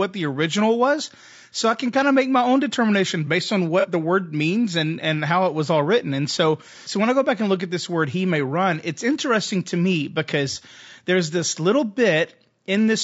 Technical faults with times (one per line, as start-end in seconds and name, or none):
0.00-13.03 low-delay AAC compression
3.80-3.86 AAC frame loss with concealment
10.52-10.57 AAC frame loss with concealment